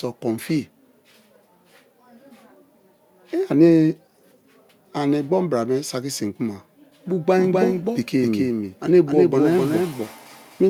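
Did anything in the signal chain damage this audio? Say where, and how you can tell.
Yes: a doubled audio track from 7.44 s to the end, where a second copy about 5 dB quieter enters abruptly roughly 300 ms behind, likely from a slower duplicate capture path or a misaligned edit.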